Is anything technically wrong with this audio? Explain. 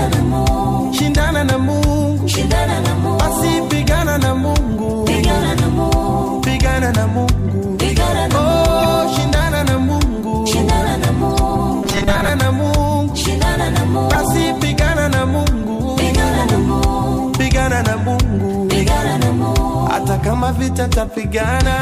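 Yes. The audio has two kinds of fault.

Corrupt frame decoded: at 8.79 to 8.87 s, 11.35 to 11.39 s and 14.13 to 14.19 s, a few compressed frames arrived with flipped bits, and the decoder played them anyway. Misread gains and codes put energy at the wrong frequencies for the span of the damaged frames. Each event is heard as a brief chirp or burst of noise that doesn't belong to the surrounding sound.

Robotic sound from repeated short buffers: from 11.83 to 12.30 s the sound turns into a rigid, metallic buzz at 200 Hz that still loosely follows the underlying audio. The likely cause is new audio arriving too seldom, with the playback filling the gaps by repeating the last short buffer. A 200 Hz buzz fits a repeated segment of about 5 ms. Roughly half of the real audio in that stretch is replaced by repeats and skipped.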